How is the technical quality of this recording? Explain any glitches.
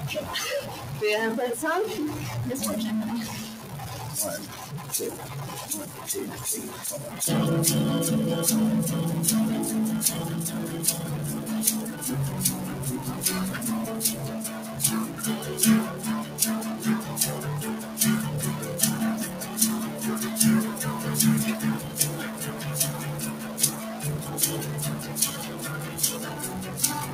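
The recording has three kinds of fault: constant distortion, pumping from a noise suppressor, and eight distinct dips in level.

Stuck bit: Throughout, distortion rides on the sound and quiet passages fill with noise, likely from one converter bit stuck at a fixed value.

Noise suppressor applied to music or sounds: A speech-tuned suppressor treats sustained parts and tails as noise, so the level pumps and thins, swinging by around 10 dB throughout.

Sound cut by the noise suppressor: Steady or decaying sound is pulled down by about 5 to 7 dB at 3.52–3.72, 5.89–6.04, 14.46–15.23, 15.91–17.13, 17.77–17.99, 19.27–20.02, 21.81–24.03 and 24.97 s to the end.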